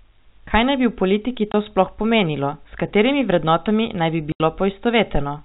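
At 1.52 to 1.54 s and again at 4.32 to 4.40 s, the speech drops out to dead silence, which is packet loss filled with silence. The 20 ms and 80 ms gaps fit one and four lost 20 ms packets, and their abrupt edges cut hard against the band-limited G.711 telephone sound.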